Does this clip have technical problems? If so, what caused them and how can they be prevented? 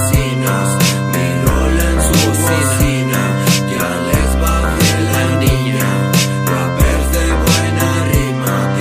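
No, there are no audible technical faults in this recording, so there is nothing to trace to a cause or guard against.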